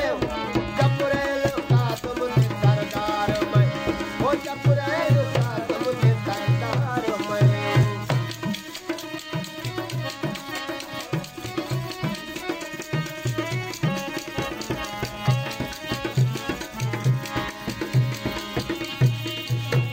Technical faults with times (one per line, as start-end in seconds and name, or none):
7.83 block of digital silence